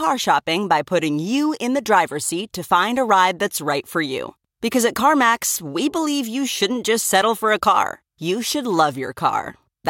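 No technical faults are audible.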